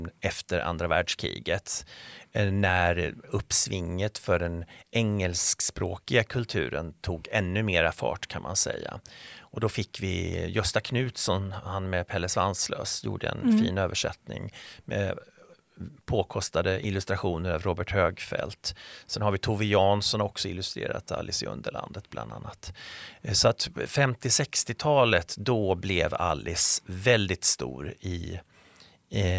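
A recording of speech, with nothing technically wrong to report. No fault can be heard at any point in it.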